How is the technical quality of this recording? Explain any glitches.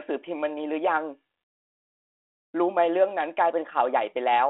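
No glitches to explain: the speech comes through G.726 ADPCM at 32 kbit/s in a 300 Hz to 3.4 kHz telephone band, carrying only the light coding grain that rate leaves.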